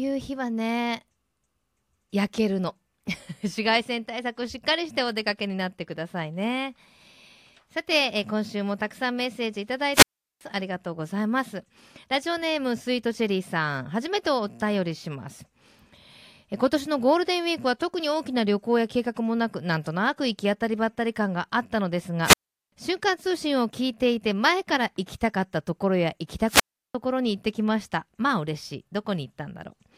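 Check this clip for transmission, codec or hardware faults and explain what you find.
Three wireless microphone squelch dropouts interrupt the speech, at 9.93–10.41 s, 22.22–22.72 s and 26.46–26.95 s. At each, the radio link fades, hiss swells, and the receiver's squelch mutes the output for about 0.38, 0.39 and 0.35 s. On a spectrogram, a broadband noise smear precedes a blank gap; the waveform flattens almost to nothing.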